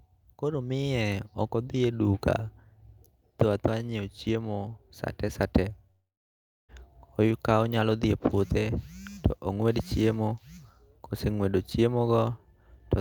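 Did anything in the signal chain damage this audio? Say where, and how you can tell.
Yes. A long network dropout runs from 5.91 s to 6.71 s in this speech clip. For about 0.78 s no audio reaches the listener. The receiver first stretches the last sound into a fading buzz, and then the gap falls to silence for about 0.68 s. Speech resumes at 6.71 s with the missing stretch simply gone, not delayed. That pattern of concealment, then silence, then a clean restart points to packets likely lost on the network path.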